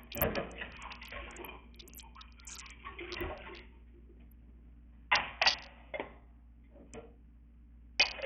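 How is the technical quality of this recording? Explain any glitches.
The recording is heavily codec-damaged throughout. Likely Bluetooth SBC compression: coarse sub-band quantisation leaves gritty noise and aliasing, with nothing above 17.3 kHz, which fits a starved bitrate near 48 kbps.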